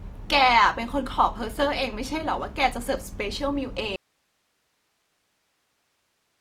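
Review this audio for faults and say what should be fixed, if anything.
The speech has a grainy, rough texture throughout, with tones turned noisy rather than clean, while the bandwidth still extends to about 20.2 kHz. This is likely Opus compression in its music (CELT) mode, filling starved bands with noise at a rate that fits roughly 24 kbps. Encoding at a higher bitrate, or keeping an uncompressed master, would prevent it.

At 3.96 s the speech cuts off abruptly and does not return. From there to the end only hiss remains, far below the speech level, around 45 dB down. This audio dropout to a faint residue likely means the source signal was lost while the recording path after the break stayed live. Monitoring the input connection and levels during capture would prevent it.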